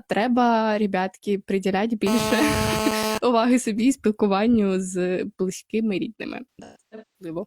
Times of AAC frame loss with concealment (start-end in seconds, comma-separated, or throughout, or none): 6.55-7.33